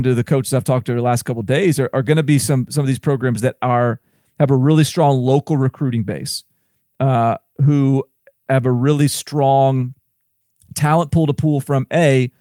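Speech recording, no technical faults heard.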